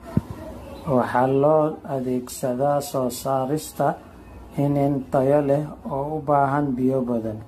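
From start to finish the speech sounds swirly, hollow and smeared, with blurred consonant attacks and nothing above 14 kHz. This is likely generation loss: repeated lossy re-encoding, around ten passes, fitting AAC-LC at 64 kbit/s, each requantising on a shifted frame grid.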